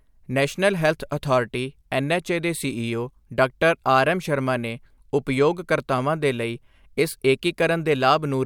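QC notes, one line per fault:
No fault found.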